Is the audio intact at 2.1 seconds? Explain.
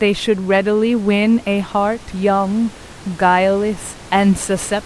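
Yes, the audio is intact at 2.1 seconds, with only the room's own background noise sitting about 22 dB below the speech.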